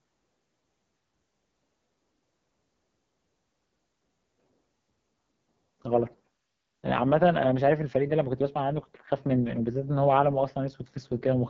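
Throughout the clip the speech has passed through the AMR wideband (HD Voice) codec at what sounds like its lowest mode, around 6.6 kbit/s. The vocal model is starved of bits, so the speech turns rough and raspy, with nothing above 7.6 kHz.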